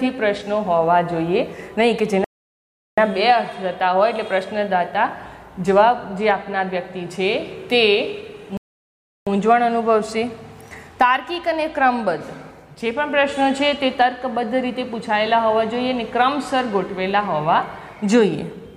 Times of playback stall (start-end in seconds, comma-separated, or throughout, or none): 2.24-2.98, 8.57-9.27